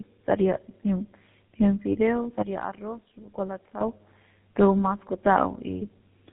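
Throughout the clip the speech shows tandem speech coding: the call was decoded and re-encoded at each link border, passing through two low-rate speech codecs in a row, which fits a G.729A stage followed by GSM full rate with a plain G.711 hop between. The second coder re-approximates the first one's errors, so the speech sounds rough, muffled and warbly, with nothing above 3.8 kHz.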